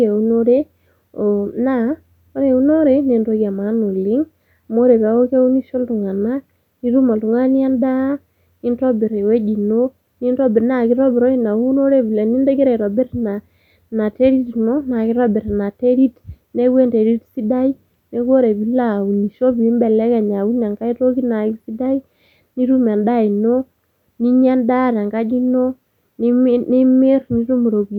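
A speech recording with nothing technically wrong to point to at any moment.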